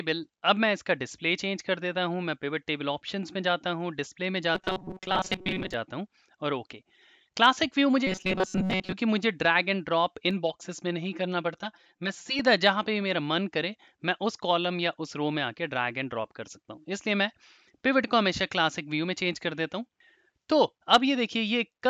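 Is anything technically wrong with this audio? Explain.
Yes, two kinds of fault are audible.

From 4.55 to 5.74 s and again from 8.07 to 8.92 s, the sound turns into a rigid metallic buzz at 188 Hz: robotic sound from repeated short buffers. The likely cause is a starved stream looping a chunk of about 5.3 ms while most of the real audio is skipped.

From 10.31 to 12.39 s the audio goes hollow and phasey. This is channel delay (comb filtering): one channel lags by roughly 5 ms, and summing to mono cancels shared content at evenly spaced notches starting near 100 Hz.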